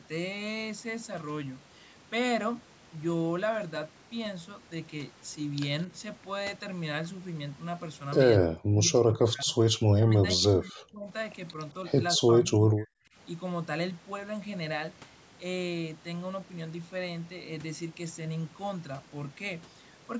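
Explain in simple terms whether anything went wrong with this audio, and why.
Both ends seem to have talked at once, and the echo canceller likely mistook this talker for echo and turned it down: speech suppressed in double talk. From 8.41 to 11.08 s and 12.18 to 13.16 s, the speech drops away sharply.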